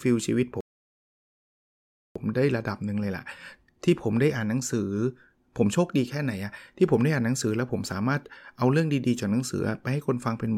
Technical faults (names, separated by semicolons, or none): rebuffering stall